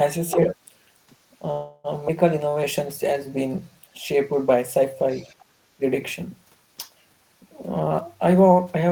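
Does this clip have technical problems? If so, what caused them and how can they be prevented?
Yes. There are six kinds of fault.

Call audio freeze, 1.51 to 1.87 s: packets were likely held up in transit and the jitter buffer ran dry. The receiver filled 328 ms with a fading continuation, then resumed where it stopped, so nothing is lost, only delayed. Prevention: reduce network jitter with QoS prioritisation, or allow a slightly deeper jitter buffer.

Skip ahead, 2.08 to 2.11 s: roughly a tenth of a second of audio was dropped and the two sides were joined almost directly, jumping forward with no audible gap. Prevention: cut packet loss and avoid buffer overflow with smoother, better-provisioned network paths.

Jitter buffer slow-down, 2.43 to 2.65 s at 85% speed (41 ms added) and 3.07 to 3.81 s at 90% (76 ms added): the receiver repeated pitch periods to rebuild its reserve, stretching sounds at unchanged pitch. 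Prevention: stabilise packet arrival so the buffer does not need to refill.

Other side's voice leaking through, 5.10 to 5.45 s: a faint second voice, about 30 dB below the main speech, is heard, likely loudspeaker echo the canceller left in the microphone signal. Prevention: use a headset, or tune the echo canceller for the device's loudspeaker-microphone coupling.

Speech suppressed in double talk, 5.77 to 5.84 s: the talker dips by about 20 dB for some 70 ms, likely because the echo canceller attenuated everything while both sides spoke. Prevention: use an echo canceller with better double-talk detection, or a headset.

Jitter buffer speed-up, 7.81 to 8.89 s: the receiver removed short pitch-period pieces, about a third of a second in total, running at 123% speed at the same pitch, which sounds hurried. Prevention: avoid bursty packet delivery that overfills the buffer.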